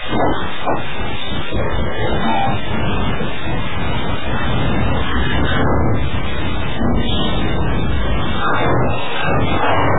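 The clip is everyday sound, and it is damaged for its full length by two overlapping faults. The first is a coarse, grainy distortion that rises and falls with the sound itself: it is loud on louder passages, and the quietest moments sputter or fall to silence rather than fading smoothly. That is the signature of low bit depth without dither, likely a truncation to only about 3 bits, leaving the error only about 15 dB below the sound. Unlike steady hiss or dithered noise, it vanishes when the sound stops and changes character with every change in level. The second fault is likely MP3 compression at a very low bitrate, around 8 kbps. Nothing is left above 3.8 kHz, so the top end is dull and closed in. What separates this from a simple low-pass filter is the watery, swirling texture underneath. Weak frequency bands blink on and off from frame to frame, producing metallic chirps on bright sounds and smeared attacks.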